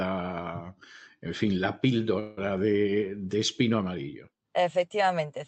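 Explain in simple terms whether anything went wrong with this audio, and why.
Yes, there is a call audio freeze from 2.19 to 2.39 s. For about 0.18 s, the speech stretches into a fading buzz or hiss. The likely cause is delayed network packets. When they arrived, the speech resumed where it stopped, so nothing was lost, only delayed.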